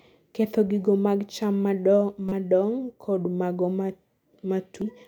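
Damaged data in a compressed stream interrupts this speech twice. From 2.29 to 2.32 s a stretch of corrupted bytes leaves the decoder unable to read the frames it expects. It loses sync and hunts for the next valid frame header, and the garbled output comes through as a brief glitch of about 36 ms. At 4.82 s a much shorter patch of bad data produces a single quick glitch, cut off almost as soon as it starts.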